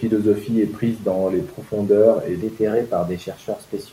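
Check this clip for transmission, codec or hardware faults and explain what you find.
One fault shows up, in the last stretch of the clip. From 2.42 s to the end, a wrong sample rate sets in. The samples are clocked out faster than they were captured, with no conversion, which fits 44.1 kHz audio played at 48 kHz. The speech runs 1.09 times fast and rises about 1.47 semitones, sounding slightly hurried and high.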